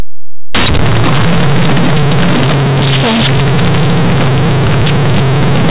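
Throughout the speech, companded audio read as linear: mu-law bytes play as plain 8-bit samples without expansion, giving harsh, buzzy, overloud distortion and heavy noise in pauses, over narrowband telephone audio.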